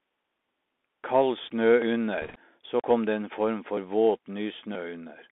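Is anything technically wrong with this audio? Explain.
Yes, a few things. The whole clip runs through a Bluetooth CVSD headset codec. The band sits between 250 Hz and 3.6 kHz, and the one-bit, 64 kbps-style delta coding can't keep up with fast changes, so sibilants come out scratchy over a grainy hiss.

At 1.82 s and again at 2.80 s, just before "kom det en form", you get a small skip where roughly 20 ms of audio is gone and the two sides are butted together. They're spaced about a second apart, so it's likely audio missing between chunks as the recorder hands off one 1.0 s block to the next.

From 2.22 to 2.39 s, right before "så kom det en", there are bit errors on the Bluetooth voice link at a rate of around 3 percent. In CVSD each flipped bit only nudges the signal a step, so you hear a rushing crackle over the speech rather than sharp clicks.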